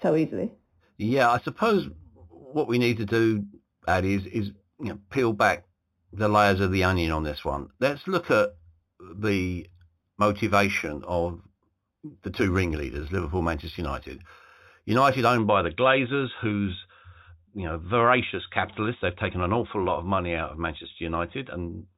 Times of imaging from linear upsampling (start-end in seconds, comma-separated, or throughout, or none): 0.00-15.39